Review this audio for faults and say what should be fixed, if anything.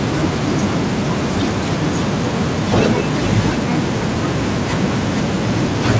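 Echo leak, 2.70 to 3.05 s: speech returns 475 ms later at roughly equal level, likely a far-end loudspeaker escaping echo cancellation; spectrograms show repeated harmonics shifted right. A headset or stronger echo cancellation at that end would prevent it.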